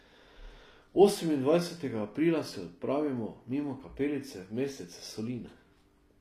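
From start to finish, the s sounds come across gritty and lispy, and the treble sounds synthetic, with nothing above 15 kHz. This is likely HE-AAC compression at a low bitrate around 24 kbps, where the treble is rebuilt from copied lower bands.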